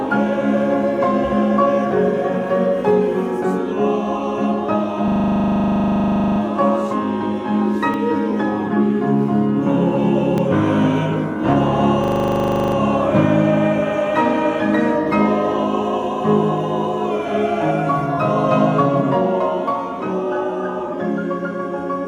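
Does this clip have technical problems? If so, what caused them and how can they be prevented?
Yes. From 5.08 to 6.4 s, and again from 12.04 to 12.76 s, you get a system hang loop. The machine or driver stalled while the hardware kept replaying its ring buffer, so a 40 ms chunk repeats, 33 times the first time and 18 the second. At a 25 Hz loop rate that comes out as a rough, buzzy stutter rather than a clean tone. To prevent it, track down whatever is blocking the audio thread, such as driver trouble or CPU starvation.

At 7.94 s and 10.38 s there are jumps where the sound skips ahead, with roughly 20 ms missing each time and no gap of silence. The likely cause is a dropped buffer (overrun), where the software didn't read its samples before the hardware overwrote them, so the audio on either side got butted together. A bigger buffer or a higher-priority capture thread should stop that.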